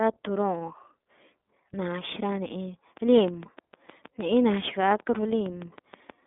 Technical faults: iLBC codec; train of clicks

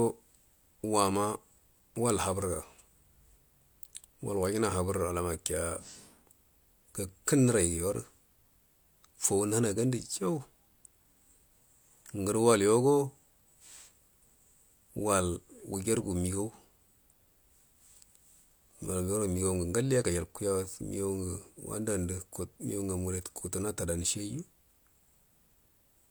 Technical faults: none

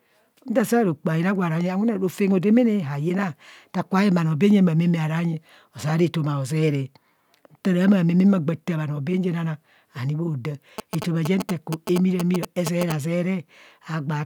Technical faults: GSM signalling bursts

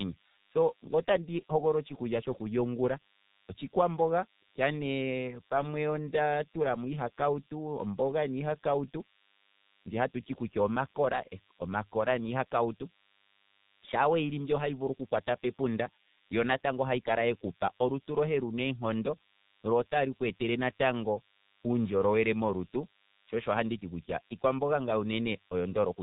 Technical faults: DECT cordless phone buzz; G.723.1 codec

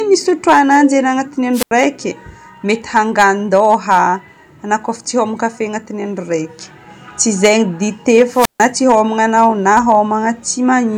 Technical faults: hard clipping; wireless microphone squelch dropout

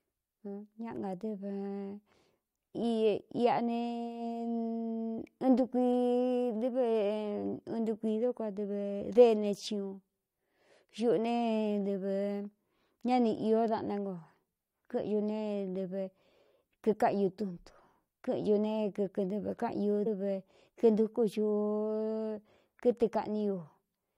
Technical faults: damaged data in a compressed stream

